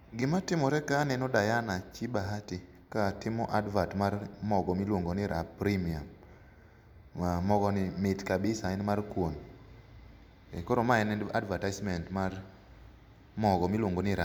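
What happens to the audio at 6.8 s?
Nothing goes wrong at 6.8 s; the speech carries on intact through that moment with no dropout, glitch or distortion.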